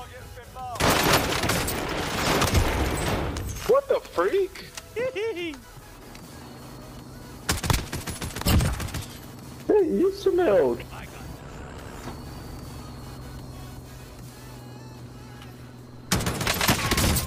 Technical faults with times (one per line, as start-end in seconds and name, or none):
none